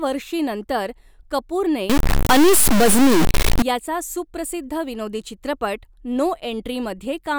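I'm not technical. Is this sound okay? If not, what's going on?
No, not quite. From about 1.9 to 3.6 seconds the speech turns harsh and buzzy, as if it's being pushed through a broken speaker. That's a fault called a stuck bit. The likely cause is that one of the tiny on/off digits making up the digital sound got jammed in one position, so many moments of the waveform get knocked off by a fairly big fixed step. It also fills the quiet gaps in that stretch with a gritty hiss.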